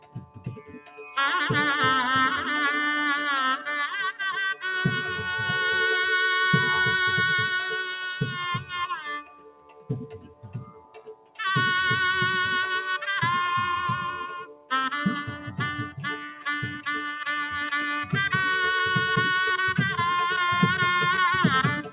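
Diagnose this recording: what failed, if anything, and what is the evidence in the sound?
Call processing stage: a speech-tuned noise suppressor was left on over music or sounds. It treats steady content as noise, so the level pumps by around 10 dB throughout.

Sound cut by the noise suppressor at 0–1.17 s, 7.71–8.39 s, 8.58–8.75 s, 8.91–11.39 s and 14.44–14.71 s. Sustained parts sink by up to about 18 dB.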